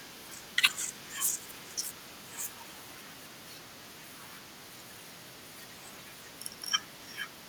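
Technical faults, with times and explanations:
Throughout, echo leak: a faint delayed copy of the speech trails the original by about 376 ms, sitting roughly 25 dB below it. The likely cause is a far-end loudspeaker whose sound reached that side's microphone and was not fully removed by its echo canceller. The residue was then sent back down the line, arriving late enough to be heard as separate.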